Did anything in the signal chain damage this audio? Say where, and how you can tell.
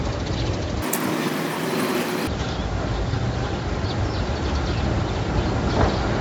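Yes. From about 0.82 s to 2.27 s there's a wrong sample rate fault at the playback or driver stage. That stretch races by at three times normal speed, with pitch jumping up about 19 semitones. Speed and pitch move together, so the samples were clocked out too fast with no resampling. A clean 3:1 ratio fits 16 kHz material being played as if it were 48 kHz.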